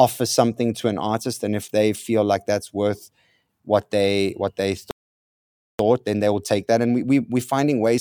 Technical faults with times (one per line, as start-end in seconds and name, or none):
4.91-5.79 playback stall
5.79-8.01 time-compressed catch-up